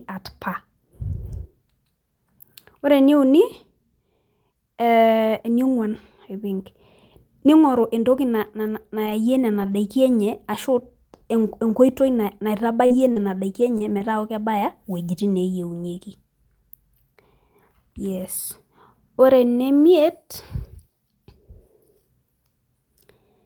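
Around 7.77 s the speech gets a quick rough patch, and it happens again at 8.66, 9.06, 9.10, 9.62 and 9.72 s. Each is a lost packet rebuilt from error correction: a 20 ms stretch decoded from the low-bitrate backup copy in the next packet, so there's no gap, just a grainier, noisier moment.

From 8.82 to 8.86 s there's a short concealed packet loss. About 20 ms never arrived, and the decoder extended the preceding sound to cover it before crossfading back, which comes across as a brief smear or wobble.

Between 12.86 and 14.02 s there's repeated packet loss with a robotic sound. Four separate holes, the longest about 40 ms and around 120 ms missing in total, get patched one after another. The result is choppy, with bits of the speech dropping out.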